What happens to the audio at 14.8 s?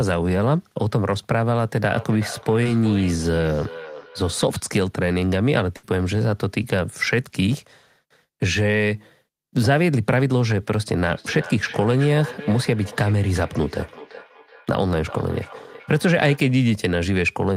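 At 14.8 s the speech is caught in feedback echo between two devices, which runs from 10.95 to 16.48 s. A nearby device replays the microphone's signal and the microphone picks it up again. Each sound returns roughly every 0.4 s at up to about −15 dB relative to the speech, seen as fainter, evenly spaced copies on a spectrogram.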